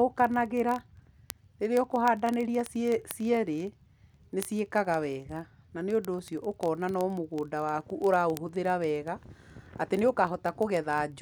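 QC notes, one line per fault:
0.10–11.21 s, word clock ticks: a steady stream of sharp little ticks, roughly one every 20 ms, so around fifty a second, or about five hundred across the speech, and not all equally loud. The receiving box is running on its own clock rather than locking to the sender's, with the two apart by something like 0.1%. Every time they slip a cycle, a single sample gets dropped or doubled and the samples around it are misread, which produces each tick.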